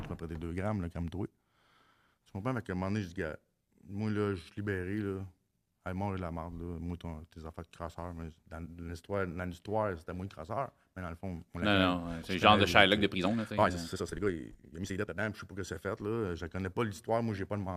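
A time-stretched section runs from 13.11 to 15.29 s, where the sound suddenly plays at twice its pace while the pitch holds steady. This is likely software squeezing the passage to fit a shorter length by dropping short pieces, leaving it rushed.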